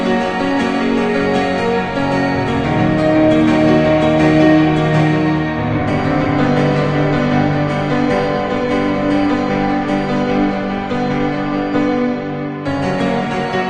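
No technical faults can be heard anywhere in this recording.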